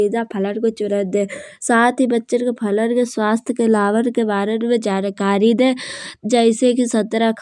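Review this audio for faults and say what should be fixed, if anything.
No faults; nothing to fix.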